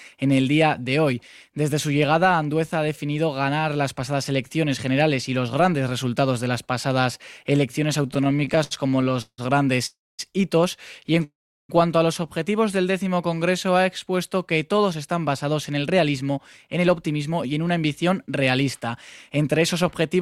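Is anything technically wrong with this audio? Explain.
Yes. Between 8.03 and 9.40 s the audio stutters in repeated stalls. The jitter buffer kept running dry, so the receiver stretched the last sound to cover 24 short gaps. These add up to 445 ms, a third of that span, and the longest is 162 ms. Nothing is lost. The sound drags and hiccups while the receiver waits for late packets.

There are two call audio freezes, from 9.86 to 10.21 s and from 11.24 to 11.71 s. Each time the audio holds briefly and then fades out. The first fills 326 ms, 230 ms of it silent. The second fills 452 ms, 370 ms of it silent. The likely cause is packets held up in transit, emptying the buffer. Playback then resumes where it stopped, so only a gap is added.

From 13.04 to 14.16 s a jitter buffer slow-down draws the sound out. The buffer was low, so the receiver repeated single pitch periods to rebuild its reserve. 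That adds 89 ms and plays at about 93% speed. The pitch does not change, but the sound is drawn out.

Two jitter buffer speed-ups follow. From 15.55 to 16.38 s the audio runs at 108% speed. From 16.78 to 20.16 s it runs at 106%. The buffer held more than its target, so the receiver trimmed short pitch-period pieces to cut the delay. About 70 ms is removed in the first stretch and roughly 200 ms in the second. The pitch stays the same, but the sound is hurried.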